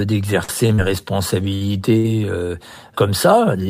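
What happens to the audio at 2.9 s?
Nothing goes wrong at 2.9 s; the speech runs on intact through that moment with no dropout, click or distortion.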